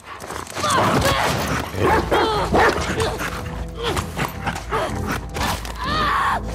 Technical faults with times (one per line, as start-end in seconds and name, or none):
none